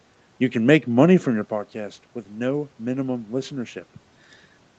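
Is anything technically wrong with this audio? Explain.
No, nothing technically wrong stood out on listening to this audio.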